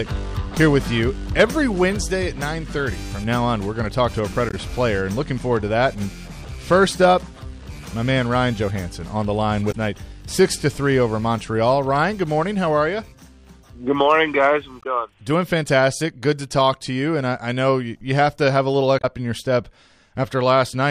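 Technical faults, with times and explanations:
4.48–4.54 s, 9.69–9.75 s, 14.80–14.86 s and 18.97–19.05 s: damaged data in a compressed stream. Each event is a short chirp, squawk, click or hole lasting about 60 to 70 ms. At these points the encoded bytes are corrupt, so the decoder either misreads the affected frames and outputs garbled spectral content, or rejects them. It then loses frame sync and has to find the next valid header before clean audio resumes.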